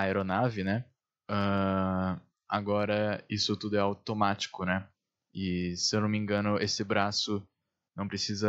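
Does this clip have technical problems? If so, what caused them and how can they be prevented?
No, the speech shows no audible technical faults, so nothing here needs a cause traced or a fix.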